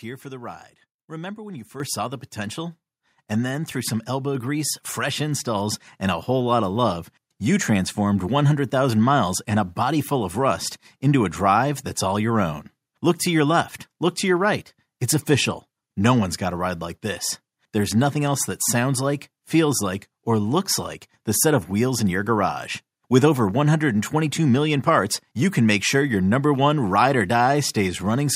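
At 1.8 s the call software judged the microphone too quiet and raised its input volume in one step, a microphone volume stepped up by about 9 dB, then again by about 3 dB at 4.35 s. Speech and background jump louder together each time.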